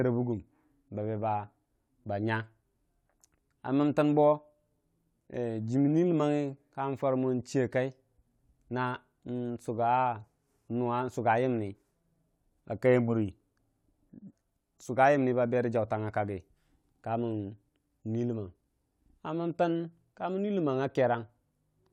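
Nothing in this recording trips up the ear, and there's no moment anywhere along the way where the audio glitches, drops out or otherwise goes wrong.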